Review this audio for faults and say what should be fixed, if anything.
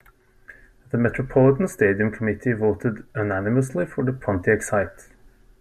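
Nothing in this speech recording needs fixing. No fault can be heard at any point, so there is nothing to prevent.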